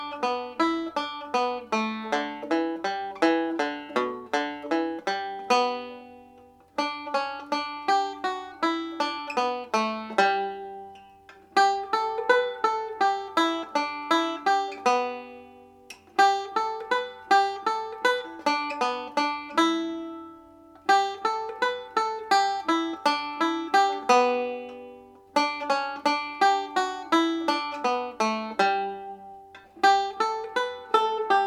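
No technical faults can be heard anywhere in the recording.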